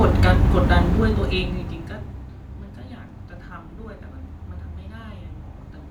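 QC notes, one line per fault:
No faults found in this speech. The level stays smooth and even.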